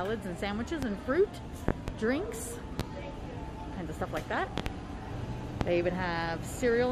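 Loud pops break in at 0.83–0.86 s, as a double pop at 1.69–1.92 s, then at 2.80–2.83 s, as another double at 4.58–4.70 s, and at 5.61–5.65 s. Each is a sharp thump riding over the continuing sound, peaking roughly 15 to 25 dB above it, loudest at 1.69 s. The likely cause is a voltage step from a switch, static or driver glitch. On the waveform they appear as tall isolated spikes; on a spectrogram, as thin full-height vertical bars.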